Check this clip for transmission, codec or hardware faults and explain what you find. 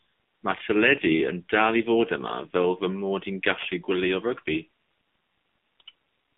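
AMR narrowband mobile codec damage runs through the whole clip. The speech is limited to 150 Hz to 3.5 kHz. The codec rebuilds each 20 ms frame from a vocal-tract model and a few pulses. It sounds plainly buzzy and synthetic, which fits roughly 7.4 kbps.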